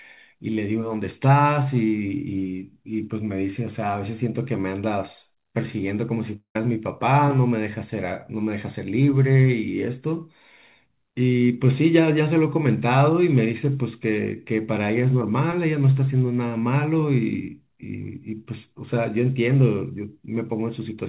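Speech heard through a narrowband call path with nothing above 4 kHz, with a gap from 6.36 to 6.56 s where the last sound smears into a fading buzz, then about 90 ms of silence, before speech resumes with a piece missing. The likely cause is a long network dropout. On a spectrogram the frames just after 6.36 s repeat as smeared, fading bands before going blank; the waveform shows decaying energy, a flat stretch, then an abrupt restart.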